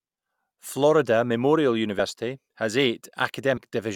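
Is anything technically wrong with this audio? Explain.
Yes: compressed frames skipped, at 1.98 s (about 40 ms of audio, around two frames) and 3.56 s (about 100 ms, around four). Whole codec frames, which fit roughly 21 ms each, go unplayed, so the speech jumps ahead.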